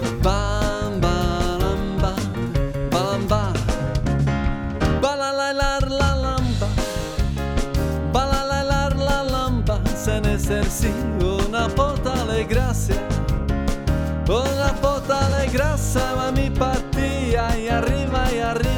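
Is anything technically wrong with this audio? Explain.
No, no technical faults detected.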